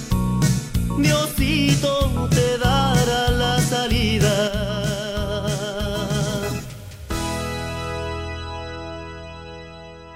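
At 4.48 s the sound abruptly falls by about 6 dB and stays lower to the end, likely because one channel drops out.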